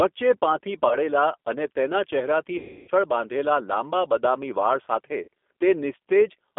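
The whole recording runs through the G.729 codec at 8 kbit/s. The line passes only about 250 Hz to 3.5 kHz. The codec damage is plainly audible. Speech sounds rough, thin and slightly synthetic, because it is rebuilt from a filter, a pitch predictor and a few pulses.

VoIP packet loss concealed by the speech codec strikes three times. At 0.88 s, 30 ms goes missing, fitting one lost packet. From 2.58 to 2.90 s, 300 ms is lost. The decoder stretches the last sound into a fading buzzy tone or coloured noise. At 5.22 s, a 60 ms gap recurs briefly.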